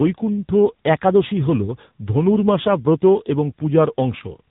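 Tandem speech coding runs through the whole clip: the speech sounds as if it was passed through two low-rate speech coders in a row, with a plain telephone-grade link between them. The character fits an ADPCM stage near 24 kbit/s followed by AMR-NB at around 8 kbit/s. The second coder re-encodes the first one's errors instead of clean speech, so the roughness, muffling and warble build up. Nothing is heard above 3.8 kHz.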